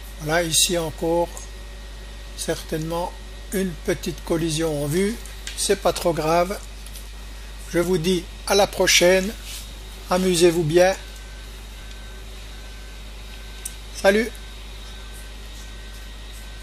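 An overlap between stream segments occurs at 11.82 s. Two neighbouring pieces of the stream, which appear to be about 4 s long, carry time stamps that claim the same stretch of time. The player treats that shared stretch as duplicated and discards it, even though the material was never actually repeated. Roughly 9 ms of real audio is lost, and the waveform jumps straight across the gap, producing a brief skip in the sound.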